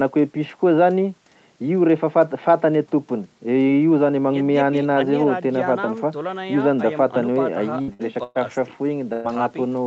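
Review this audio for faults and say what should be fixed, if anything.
Burst of packet loss occurs four times, at 7.81 to 7.90 s, 7.93 to 8.02 s, 8.23 to 8.38 s and 9.13 to 9.27 s. The receiver carries the last sound forward and fades it. The first two gaps drop 60 ms of speech each. The last two drop 120 ms. The speech then jumps ahead. To prevent this, enable Opus in-band forward error correction and allow a slightly deeper jitter buffer so late or lost packets can be recovered.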